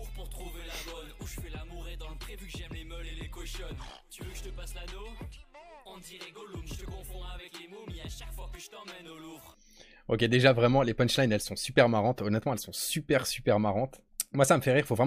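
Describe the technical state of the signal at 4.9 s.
At 4.9 s the signal is intact, with no dropout, distortion, glitch or other technical fault to be heard at that point.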